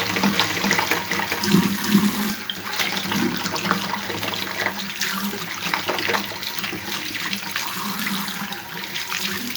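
Most likely a second, slower capture path, or an edit that left two copies of the material out of step, is feeding the same audio into the mix twice. The doubled audio track is already present as the clip opens and runs to 2.3 s. A full-band duplicate trails the original by roughly 0.4 s at around 5 dB lower, with no decay or room colouring. Every event sounds twice, and the echo stops abruptly at 2.3 s rather than fading away.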